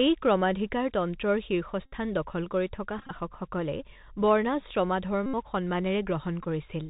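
Throughout, the speech sounds narrow and scratchy, with granular hiss and rough s sounds: the Bluetooth CVSD headset codec passes nothing above 4 kHz and its adaptive step cannot keep up with loud high sounds. A short buzz near 267 Hz comes from 1.86 to 1.93 s, a broken rattle from 2.99 to 3.11 s with runs of around 20 ms at most, another buzz from 5.26 to 5.35 s, and a brief burr at 6.43 to 6.47 s. Each is a Bluetooth headset packet repeated, where lost packets were replaced by replaying the last one every 3.75 ms.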